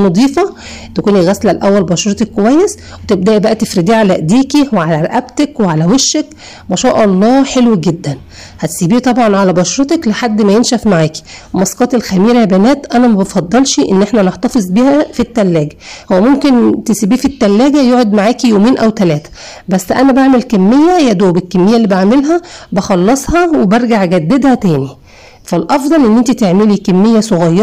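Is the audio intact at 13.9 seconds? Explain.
No, the signal is driven about 9 dB past what a stage can pass throughout, so roughly a sixth of samples are cut flat, giving hard clipping's harsh fuzz on loud sounds.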